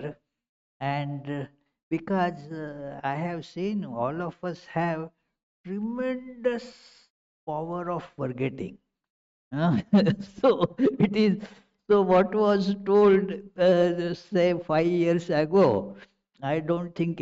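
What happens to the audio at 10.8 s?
Nothing goes wrong at 10.8 s; the audio plays through that point intact, with no dropout, click or distortion.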